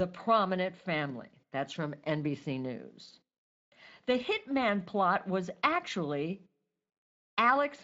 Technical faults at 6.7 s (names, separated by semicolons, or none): none